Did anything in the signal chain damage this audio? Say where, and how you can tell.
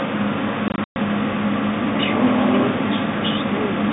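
Yes, at the network stage: packet loss filled with silence. Between 0.68 and 0.96 s the speech drops out in several hard-edged gaps, about 180 ms missing in total over that 280 ms stretch, the longest single hole 120 ms. The gap lengths step in units that fit 20 ms packets. The receiver inserted digital silence instead of concealing the loss, so each gap starts and ends abruptly. The telephone band, roughly 200 Hz to 3.7 kHz, is audible throughout.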